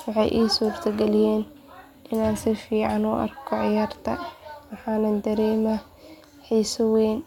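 Listening through the speech, nothing stood out as a technical fault at any point.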